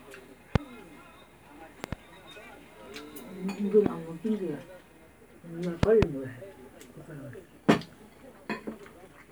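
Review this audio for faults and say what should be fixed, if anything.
Loud pops occur at 0.56 to 0.58 s, 1.84 to 1.95 s, 3.86 to 3.88 s and 5.83 to 6.05 s. The first and third are single pops; the second and fourth are pairs in quick succession. They peak at about 20 to 25 dB above the surrounding sound, which continues underneath. The cause is likely a sudden voltage step or pulse, for example from a connector, switch, static discharge or driver glitch, shaped into a thump by the downstream circuitry. Secure cabling and connectors, avoid switching or plugging during capture, and check interface drivers to prevent recurrence.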